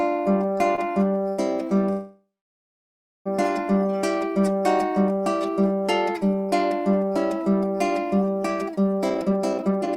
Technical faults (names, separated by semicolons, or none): short stall from a late packet; call audio freeze; jitter buffer speed-up